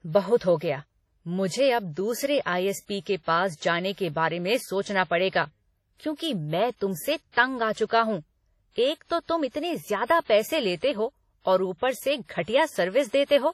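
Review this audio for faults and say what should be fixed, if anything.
The speech has a ringing, washy quality for its whole length, with a hiss that swells and fades along with the voice, and nothing is present above about 15.1 kHz. This is likely WMA compression. A transform codec like WMA works on long blocks, so its quantisation noise smears across tens of milliseconds around each sound, and quiet spectral detail gets zeroed out. The heavy damage fits a low bitrate of around 32 kbps. To prevent it, keep a lossless master and, where lossy delivery is needed, encode once with a modern codec at a substantially higher bitrate.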